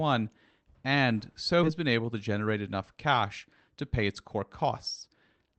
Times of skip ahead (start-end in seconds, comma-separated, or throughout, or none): 1.63-1.65